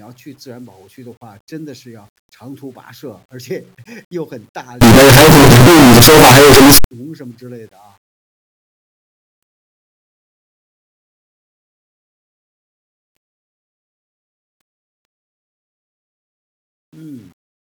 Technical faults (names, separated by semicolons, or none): signed and unsigned mixed up